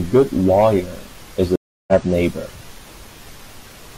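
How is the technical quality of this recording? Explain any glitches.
The recording has one clear glitch, a stream reconnect from about 1.56 to 1.93 s. The connection dropped, the player went silent for 320 ms, then reconnected and started a new decoder mid-stream. When the speech returns it has jumped ahead by roughly a third of a second, so part of the speech is simply missing. Unlike a plain dropout, which leaves a hole in continuous audio, here the timeline itself skips forward, and the restart comes in muted or faded rather than abruptly.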